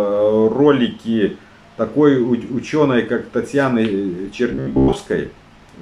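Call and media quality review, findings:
Likely buffer starvation, 4.52–4.97 s: last 15 ms repeated across most of span (robotic sound from repeated short buffers). Sound becomes rigid metallic buzz near 67 Hz.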